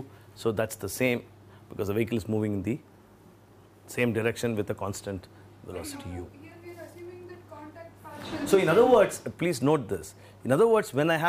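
Dropped samples at 9.95 s: a single sharp click cuts through the sound, showing as a thin vertical line across the spectrum. The likely cause is a fraction of a millisecond missing from the stream, so the waveform jumps abruptly to a later value.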